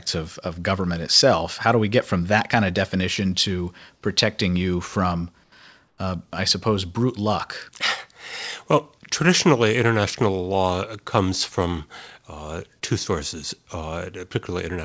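Speech, carried over a wideband call path with nothing above 8 kHz, which fits a codec such as G.722. At 5.44–5.52 s and 5.88–5.98 s, short gaps of 80 ms and 100 ms have comfort noise in place of the background: the real room sound gives way to a flat, featureless hiss, about 7 dB quieter in the first gap and about 2 dB in the second. The likely cause is discontinuous transmission, with the receiver synthesising noise while the sender is silent.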